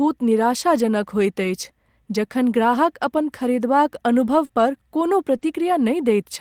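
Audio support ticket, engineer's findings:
Rough, noisy patches, no gap, at 1.43–1.49 s (40 ms) and 5.41–5.43 s (20 ms). Lost packet rebuilt from error correction: the decoder played low-bitrate Opus copies carried in the following packets.

Brief smears at 4.45–4.51 s (40 ms) and 5.37–5.41 s (20 ms). Short concealed packet loss: the audio arrived too late, so the receiver extended the preceding sound and blended back into the real signal.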